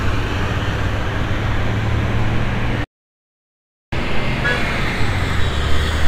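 At 2.84 s the sound just drops out for about 1.08 s, a playback stall, likely the player starving for data or its thread getting blocked, before resuming at 3.92 s. From there to the end you get catch-up at higher speed: the backlog is resampled at 1.15x, so everything runs quicker and sits about two semitones sharp.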